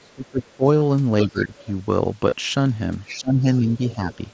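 Speech over a Bluetooth headset link, band-limited to 8 kHz by the mSBC codec. It has three kinds of fault. Speech suppressed in double talk shows up from 0.04 to 0.64 s, 1.24 to 1.56 s and 3.18 to 4.01 s. The talker's level sinks by up to about 20 dB and the upper harmonics thin or break off in pieces. On a waveform the envelope caves in abruptly, and a spectrogram shows the formant bands fading and gapping. This is likely an echo canceller treating overlapping far-end sound as echo and attenuating everything. Concealed Bluetooth headset packet loss occurs at 0.80 to 0.82 s and 2.30 to 2.32 s. Each gap lasts roughly 22 ms, which fits about three lost frames. The receiver patched each gap by repeating a recent stretch of waveform, so each one gives a brief buzzy, steady blip with a slight warble as real audio resumes. A spectrogram shows a short smear of frozen, evenly spaced harmonics, and a waveform shows a few identical repeated cycles. 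The other side's voice leaking through is heard faintly from 1.39 to 1.71 s, 3.09 to 3.14 s and 4.12 to 4.28 s, sitting about 25 to 30 dB below the main talker. This is likely loudspeaker sound that the echo canceller left in the microphone signal. On a spectrogram it appears as a weak, separate harmonic pattern under or between the main speech traces.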